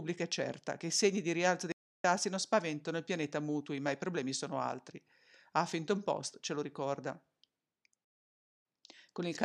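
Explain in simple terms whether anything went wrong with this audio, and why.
Two stream reconnects interrupt this speech. At 1.72 s, after "i segni di rialzo", it goes silent for about 0.3 s. It returns roughly a fraction of a second further on, at "non spaventano il pianeta". At 8.05 s a 0.6 s gap skips ahead about a third of a second. Each time the connection dropped and playback restarted.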